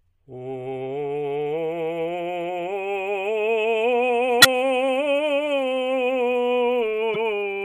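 Music with damaged data in a compressed stream at 4.40–4.45 s and 7.14–7.16 s: the decoder loses frame sync, giving brief blips that show as thin vertical smears on a spectrogram and abrupt discontinuities in the waveform.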